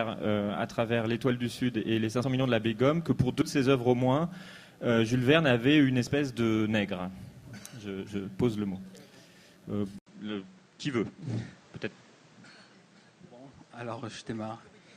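Compressed frames skipped at 2.23 s, 3.41 s and 6.07 to 6.11 s: whole blocks of encoded audio never reach the output, so the sound leaps forward by roughly 40, 70 and 20 ms, consistent with 20 ms frames.

At 9.99 s, an 80 ms gap opens and the sound returns duller and about 5 dB quieter, with nothing above 8.9 kHz and a new noise floor roughly 30 dB down. This is likely the input switched to a poorer device, which holds until the end.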